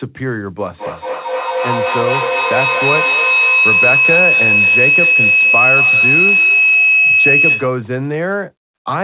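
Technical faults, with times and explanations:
0.76 to 7.85 s, feedback howl: a microphone-loudspeaker loop gains on each pass, building a tone near 3 kHz, with a loop delay of about a fifth of a second, peaking about 5 dB over speech.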